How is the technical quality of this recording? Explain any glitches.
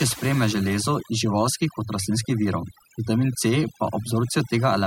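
The quality is compromised by one fault, present throughout: overdone noise removal. A noise reduction stage was set too aggressively. It cuts individual frequency bands whenever they sit near its noise estimate. Quiet parts of the voice vanish too. Pauses drop and break up into twinkling specks.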